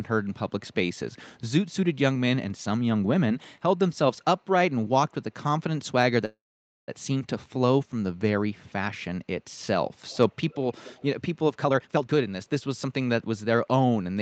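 At 6.25 s the speech stops for about 0.64 s: the last sound trails off briefly, then roughly half a second of silence follows before the talker resumes where they left off, with nothing skipped. This call audio freeze was likely caused by delayed packets draining the jitter buffer, leaving a gap inserted into the speech.

Between 10.05 and 10.32 s, again from 10.49 to 10.56 s, and from 10.78 to 11.05 s, a faint copy of the speech trails the original by about 208 ms, sitting roughly 30 dB below it in the first stretch and about 25 dB below in the other two. This echo leak likely comes from a far-end loudspeaker whose echo canceller let part of the signal back into its microphone.

From 11.57 to 13.30 s the speech sounds hurried, running at 136% of normal speed while its pitch stays unchanged, with roughly 0.7 s taken out in total. This jitter buffer speed-up happens when excess buffered audio is trimmed by cutting short pitch-period slices many times in a row to reduce the delay.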